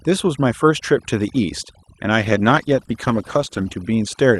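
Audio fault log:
Throughout: overdone noise removal. The noise reduction was set too strong. Bands near its noise estimate are pushed far down or removed, and quiet parts of the speech go with them. Pauses fall to near silence with twinkling specks.
2.22 to 3.81 s: call bitrate drop. The Opus call audio turns rough, watery or muffled, and the top end above the usual 12 kHz limit closes in further. This fits the encoder falling from around 40 kbps to 13 kbps and holding there for about 1.52 s before recovering.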